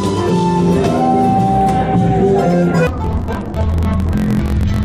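From 2.87 s to the end at 4.85 s, interleaved audio read as planar: left-right sample pairs within each 22 ms block are split into halves and played together, so the sound drops an octave and buzzes at 45.9 Hz. Unlike slowed playback, timing stays intact.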